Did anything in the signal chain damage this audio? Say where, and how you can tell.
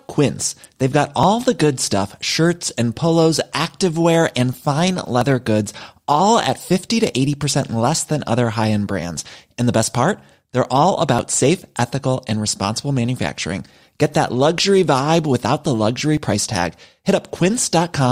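Yes, at the streaming stage, where segments are joined: overlap between stream segments. Tiny skips occur at 1.23 s (before "the good stuff"), 2.22 s (before "and polos activewear and"), 5.21 s (after "polos activewear and fine"), 9.2 s, 11.19 s and 16.17 s. Each removes 6 to 11 milliseconds of sound, and they fall about whole seconds apart, fitting 1-second segments whose timestamps overlap and get trimmed. A dropout would leave a silent gap; here sound is simply missing and the waveform jumps.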